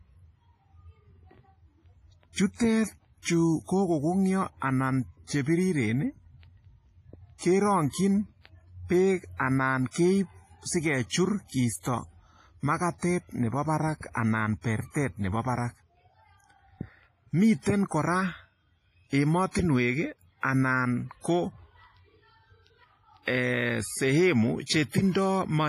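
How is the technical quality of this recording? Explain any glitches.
The speech sounds heavily processed throughout, with ringing, washy artefacts, a hiss that rises and falls with the voice, and nothing above 15.5 kHz. The likely cause is WMA compression at a low bitrate, near 24 kbps.

Pre-echo appears at 2.56, 11.80 and 19.51 s. A brief hiss leads each sharp attack by about 43, 46 and 38 ms, softening it, because the codec spreads quantisation noise across the quiet stretch before the onset.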